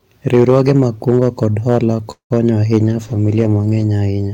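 Hard clipping runs through the whole speech clip. The level is pushed about 6 dB past what the signal path can carry, so the loudest peaks, a small fraction of samples, are sliced flat. The flat tops add high harmonics heard as crackle riding on louder syllables. It is steady and tied to loudness, with no pattern in time, which separates it from dropout clicks or codec distortion.

From 2.11 to 2.32 s the sound stalls for about 0.21 s. The last sound is stretched into a fading buzz, which falls to silence for roughly 0.11 s before the speech resumes exactly where it stopped. That points to a call audio freeze, likely caused by delayed packets emptying the jitter buffer. Nothing is lost; a gap is inserted instead, so everything after it runs late by about 0.19 s. A packet-loss dropout would skip material rather than push it later.

From 2.81 to 3.92 s a call bitrate drop takes hold. The speech turns muffled and watery, with the top end cut away, for just over a second at its worst before clarity returns. 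The degradation fits an encoder squeezed from roughly 64 to 14 kbps after the bandwidth estimate fell. Unlike the clipping, it adds no harshness on peaks. It dulls and smears everything evenly, and only within that stretch.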